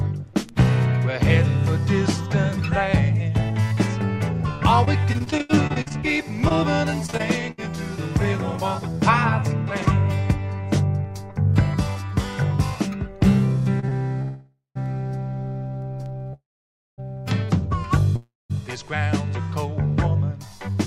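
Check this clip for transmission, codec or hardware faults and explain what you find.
Four kinds of transmission fault appear, all tied to packet delivery and jitter-buffer handling.

Repeated packet loss (robotic sound) runs from 4.85 to 7.60 s. Packets went missing or arrived too late 19 times in quick succession, and the receiver covered each hole by extending the preceding sound. About 513 ms is concealed, which is roughly 19% of the stretch, and about 400 ms of real audio is gone. The longest gap is 78 ms. The passage sounds choppy, with pieces dropping out.

A jitter buffer speed-up occurs twice, from 11.29 to 12.03 s and from 20.45 to 20.75 s. The buffer held more audio than its target, so the receiver trimmed short pitch-period slices to reduce the backlog. Each time, roughly 40 ms is removed. The first pass runs at 104% speed, which is just under the point where hurrying becomes obvious. 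The second runs at 110% and sounds rushed. Pitch stays the same in both.

A short stall from a late packet happens twice in close succession, at 13.80 to 13.85 s and at 13.89 to 13.94 s. Each time a packet missed its slot and the jitter buffer emptied. The receiver held the last sound for about 30 ms, then resumed from the same point once the packet arrived. Nothing is lost, but a moment of sound lingers briefly too long.

A call audio freeze appears three times. The first runs from 14.22 to 14.77 s, about 538 ms inserted with 130 ms of it silent. The second runs from 16.33 to 17.00 s, about 645 ms inserted with 560 ms silent. The third runs from 18.16 to 18.52 s, about 338 ms inserted with 190 ms silent. Each time the last sound continues as a fading buzz or hiss that drops into silence, and then the audio picks up exactly where it stopped, with nothing missing. The likely cause is packets held up in transit, leaving the jitter buffer empty until they arrived.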